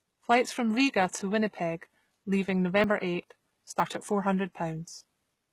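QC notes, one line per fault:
Throughout: HE-AAC compression, likely the cause of the brittle, synthetic treble on this speech. The top of the spectrum sounds pasted on rather than recorded. The codec kept only the lower frequencies and rebuilt the highs by copying lower bands upward under a coarse envelope. The harmonics therefore don't meet cleanly at the join, so sibilants come out gritty and lispy. The level of damage points to a very low bitrate, around 16 kbps.
2.84 s and 3.8 s: dropped buffer (overrun), with a small jump forward in the speech at each point and no gap of silence. The likely cause is that the recording program fell behind and the hardware overwrote a block of samples before they were read. Roughly 40 ms vanished each time, and the audio on either side was butted straight together. The missing block of samples is what produces the skipped fragment.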